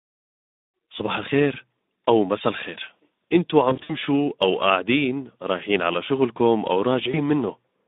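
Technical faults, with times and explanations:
Throughout: Speex codec damage, plainly audible; narrowband line around 250 Hz to 3.7 kHz, low excitation bits leave speech hoarse and noisy, spectrogram empty above 3.7 kHz.
3.69–3.94 s: VoIP packet loss concealed by the speech codec, about 100 ms lost over 200 ms, longest run 60 ms; decoder extrapolates a buzzy tone or coloured noise that fades, waveform shows smeared, decaying bursts.
7.11 s: VoIP packet loss concealed by the speech codec, one 20 ms frame; brief buzzy or noisy stretch with dipping gain, spectrogram shows smeared energy, speech weakened briefly afterwards.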